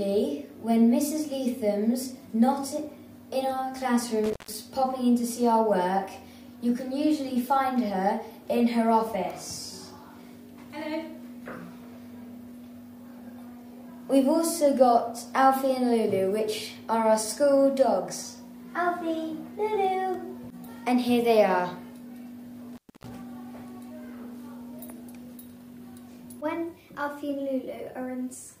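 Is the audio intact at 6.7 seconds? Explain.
Yes, at 6.7 seconds the audio is intact, with no dropout, click, distortion or other fault at that point.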